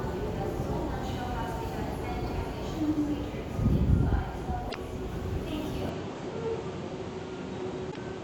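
At 4.66–4.76 s and again at 7.88–7.97 s, damaged data in the compressed stream makes the decoder lose sync, producing brief glitches. From 5.89 s the sound turns duller and about 5 dB quieter, cut off above 8.5 kHz with no gap, likely an input switched to a poorer device.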